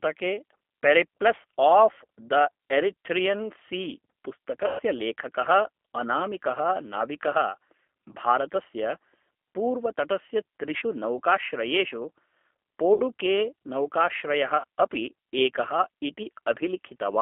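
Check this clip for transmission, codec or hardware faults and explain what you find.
Two faults are audible: G.729 codec coloring throughout, and VoIP packet loss concealed by the speech codec at five points.

The G.729 codec damage runs the whole length and is plainly audible. The speech sits in a narrow line band, about 250 Hz to 3.4 kHz. The codec rebuilds each short frame from a vocal tract model, a pitch predictor and a few pulses. Everything outside that model is lost. The result sounds thin, rough and slightly synthetic, which fits an 8 kbit/s G.729A stream.

VoIP packet loss concealed by the speech codec occurs at 2.28 s, 4.67 s, 10.78 s, 12.94 s and 14.58 s. The gaps last about 20, 120, 40, 60 and 60 ms, which points to lost 20 ms packets. The decoder filled each gap from its last pitch and filter, fading the gain. Each spot turns buzzy or smeared. The longest, at 4.67 s, stretches into a fading buzzy tone or coloured noise. 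Speech stays weak briefly after each gap.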